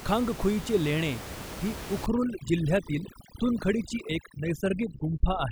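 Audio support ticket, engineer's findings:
Overdone noise removal from 2.06 s to end of clip, after "खांगखुईचे लेणे ही". Denoiser set too aggressive: bands near its noise estimate gated down or out, taking quiet speech detail too. Background drops and breaks up into twinkling specks. Room noise sits about 11 dB below speech.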